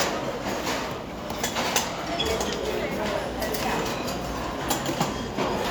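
Nothing goes wrong anywhere in this sound recording, so there's no technical fault to point to at any moment.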